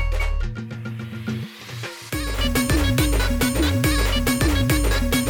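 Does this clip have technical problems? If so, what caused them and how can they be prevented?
Yes. From 2.10 to 2.39 s one channel drops out: the sound falls abruptly by about 6 dB and returns just as suddenly. A waveform shows a sharp-edged step down to half amplitude. A spectrogram shows an evenly dimmer stretch across all frequencies with clean vertical edges. The likely cause is a brief loss of one stereo leg before the mono sum, which halves the shared content. Secure connectors and watch both channel meters while recording.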